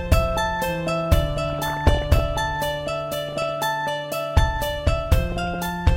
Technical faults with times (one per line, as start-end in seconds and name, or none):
1.50-2.25 DAB burbling
3.28-3.49 DAB burbling
5.30-5.67 DAB burbling